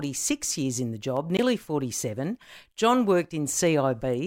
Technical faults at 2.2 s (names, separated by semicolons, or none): dropped samples